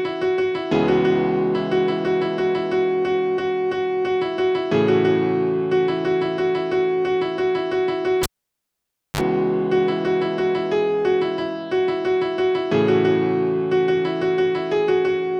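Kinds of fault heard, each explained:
Cable pulled and plugged in: a live connection was broken and then remade, so the signal path opened abruptly and closed again. You hear a pop as the plug leaves at about 8.23 s, then roughly 0.93 s of near silence while nothing is connected. As the plug goes back in, the tip touches first and a short 44 ms burst of 50 Hz mains buzz leaks through, followed by a second pop as the sound returns around 9.21 s.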